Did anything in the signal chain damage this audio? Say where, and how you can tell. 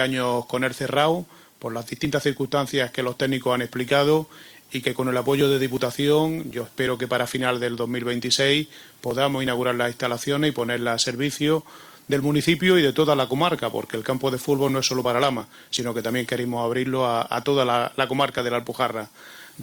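No, none of the stages between capture and playback left audible damage: the signal holds steady level and continuity with no breaks, distortion, or added artefacts anywhere in the clip.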